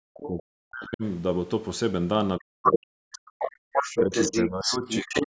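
From 0.00 to 1.04 s the talker's speech sinks nearly to silence and breaks up, likely speech suppressed in double talk, where the echo canceller turned down both voices at once. Between 0.14 and 0.29 s a faint second voice, well below the talker, slips through, likely the other side's voice leaking through from the loudspeaker.

From 2.39 to 3.28 s the speech again drops almost to nothing, likely the same double-talk suppression. Inside it, from 2.64 to 2.78 s, a leaked voice briefly sounds slightly louder than the talker. From 3.13 to 5.24 s that other voice returns at roughly the talker's level, likely leakage the canceller failed to remove.

From 3.56 to 3.72 s the room sound itself vanishes for a moment, falling by about 40 dB. This is background gated by the echo canceller, which clamped the microphone while the loudspeaker played.

At 4.00 to 4.13 s the speech dips slightly, and from 4.45 s to the end it drops steeply. 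Both are likely double-talk suppression. The call microphone processing passes nothing above 8 kHz.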